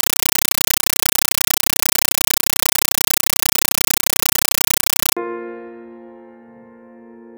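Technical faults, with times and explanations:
0.00–5.17 s: compressed stream played as audio. The music is replaced by very loud, harsh, chattering static: 8 ms noise bursts with silence between them, repeating 31.25 times per second. This fits an undecoded 384 kbps AC-3 stream. Unlike steady digital noise, it pulses rhythmically at the frame rate.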